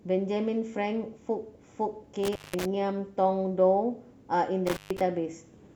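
Around 2.23 s the speech hits an intermittent contact: a loose plug or cable lead briefly loses its connection, so the signal drops out for about 180 ms within the stretch up to 2.66 s. You get a crackle as it breaks and again as it reconnects, with faint hiss in the gap. The same thing happens from 4.67 to 5.01 s, this time with a dropout of about 137 ms.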